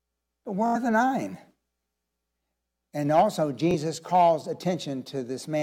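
At 0.66 to 0.76 s and again at 3.71 to 3.74 s the speech hits a Bluetooth stutter: late packets made the receiver replay its last short slice, giving first a brief machine-gun buzz and then a single repeated slice rather than silence. About 85 ms, then about 21 ms, are skipped as the speech jumps ahead.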